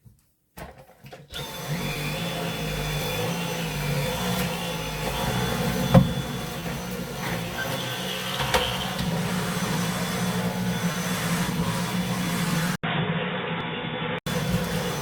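At 1.93 to 1.97 s the first short concealed packet loss occurs. About 20 ms of audio failed to reach the decoder in time, and the receiver bridged the gap by extending the preceding sound for 20 ms before crossfading back into the real signal. The result is a brief smear or wobble rather than a gap. The same short concealed packet loss recurs at 6.60 to 6.64 s and at 10.92 to 10.96 s, each with a 20 ms patch and the same smeared texture.

At 3.02 s there is a small forward jump in the sound, likely a dropped buffer (overrun). Roughly 10 ms of samples were overwritten before the application read them, and the two surviving edges are butted together with no silence between them. A smaller version of this follows at 10.10 s, skipping only a few milliseconds.

From 12.76 s the input switches to a poorer device, likely a changeover from the original microphone to a lower-grade one. An 80 ms silence marks the switch. 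After it, the sound passes a narrower band and turns dull and boxy, and a new noise floor sits around 40 dB below the signal. The level stays roughly unchanged. This narrowed sound persists until 14.27 s. Within that stretch, at 13.61 s, another likely dropped buffer (overrun) of a few milliseconds adds a small jump.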